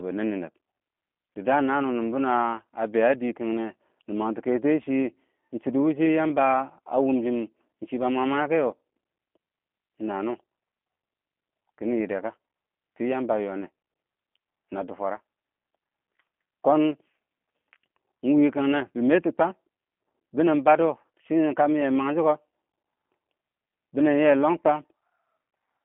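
Throughout, the speech passes through a G.729 codec, which fits an 8 kbit/s stream: it rebuilds each frame from a filter, pitch and a few pulses, leaving 200 Hz to 3.4 kHz, rough and synthetic.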